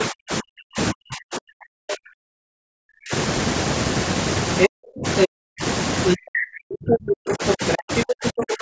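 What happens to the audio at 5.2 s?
Between 4.67 and 5.63 s the talker's speech is pulled down by as much as about 40 dB, likely speech suppressed in double talk as the echo canceller turns down both its own talker and the loudspeaker echo. From 5.17 to 5.28 s the other side's voice leaks through, a short scrap a few decibels louder than the talker, likely residual loudspeaker echo.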